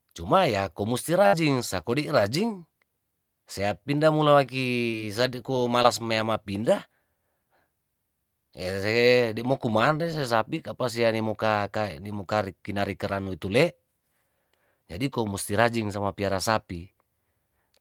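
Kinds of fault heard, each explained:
burst of packet loss: Around 60 ms of the call's packets were lost or arrived too late near 1.27 to 1.35 s, so the receiver extended the preceding sound for about 54 ms, fading it, before the speech picks up again with that stretch gone.
short concealed packet loss: Single 20 ms gaps in delivery at about 4.91, 5.83 and 13.24 s were patched by continuing the last sound for roughly 13 to 21 ms and blending back in, heard as brief smears or wobbles in the speech.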